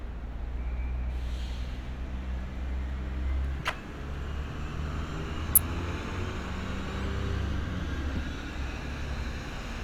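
Everyday sound recording marred by five short bursts of corrupt frame decoding: at 1.44 s, from 3.60 to 3.74 s, 5.52 to 5.59 s, 7.00 to 7.06 s and 8.11 to 8.18 s. Each is a brief chirp or noisy blip where damaged compressed frames were decoded anyway, with misread gains and codes putting energy at the wrong frequencies. Each burst spans only a few frames. The one near 1.44 s is faint, around -35 dBFS, while the 5.52 s burst is loudest at about -10 dBFS.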